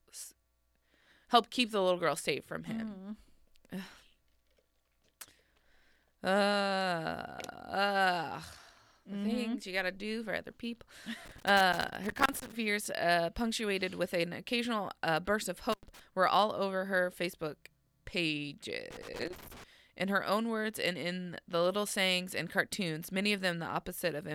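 Loose connector crackle breaks into the speech three times: from 11.25 to 12.52 s, after "do for other people" and before "fears uh punctuated with"; from 15.72 to 16.00 s, between "occasional uh burst of" and "were all over her"; and from 18.91 to 19.64 s. A worn or dirty contact somewhere in the chain keeps making and losing connection, so the signal is chopped on and off irregularly, producing ragged bursts of scratchy crackle.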